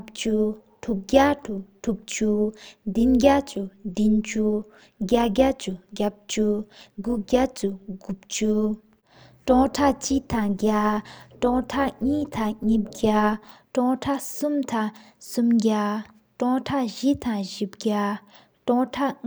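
From the start to 13.49 s, the speech carries overlap-add ripple. The signal was split into windowed frames and rebuilt, but the overlapping windows do not add up to a steady gain. So the level dips and swells once per frame, by about 6 dB. The frames repeat at around 200 Hz. That fast modulation gives the speech a metallic buzz, with extra tones around each note. At 13.49 s the ripple stops.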